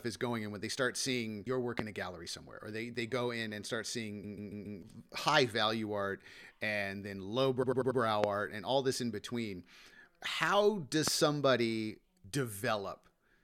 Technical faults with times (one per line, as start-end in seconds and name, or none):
1.79-1.82 loud pop
4.23-4.79 repeated frames
7.62-7.99 repeated frames
8.24-8.26 loud pop
11.08-11.10 loud pop